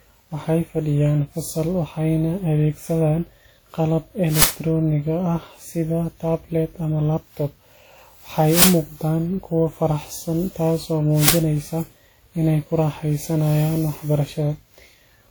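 From the start, the speech sounds swirly, hollow and smeared, with blurred attacks. This generation loss likely comes from roughly ten successive WMA encodes at around 96 kbit/s.

At 4.42–4.44 s, 8.62–8.64 s and 11.28–11.30 s, loud 20 ms bursts of harsh digital noise cut in. This is an uninitialised buffer, where leftover memory was played as audio.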